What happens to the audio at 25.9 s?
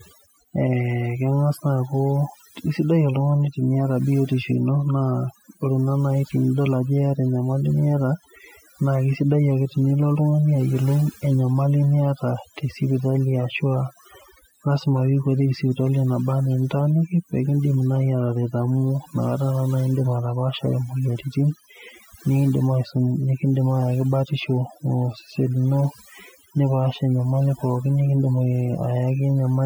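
At 25.9 s, as throughout, overdone noise removal gates bands near the noise estimate, so the background drops and breaks up into twinkling, warbling specks; a spectrogram shows blotchy holes and isolated twinkling specks between words.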